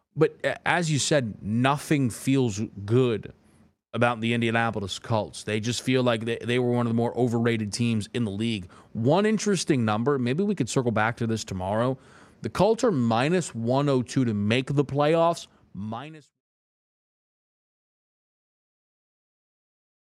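There are no technical faults in this speech clip; the smooth fade-out from around 15 s to 16.42 s is an ordinary edit.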